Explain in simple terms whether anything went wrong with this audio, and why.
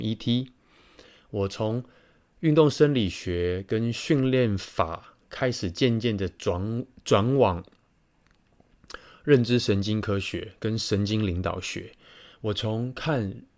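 Nothing went wrong; no faults can be heard here.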